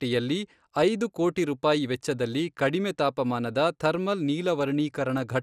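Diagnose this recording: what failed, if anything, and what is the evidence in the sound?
MP2 compression damage runs throughout the speech, from start to finish. The sound is dulled, with nothing above about 14.3 kHz, and a gurgling, granular roughness sits on the voice. The likely cause is the codec stage: MPEG Layer II carves the signal into 32 sub-bands and, short of bits, shuts off the upper ones and coarsely quantises the rest, so bands flicker. The damage is plainly audible, which fits a bitrate near 80 kbps.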